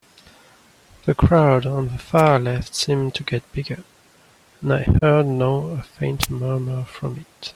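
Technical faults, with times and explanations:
2.17–2.22 s and 6.21–6.27 s, wireless microphone noise hit: two brief swishes of static, each about 50 ms. The analogue FM radio link faded as reflected signals cancelled, so receiver noise surged up through the audio until the signal recovered.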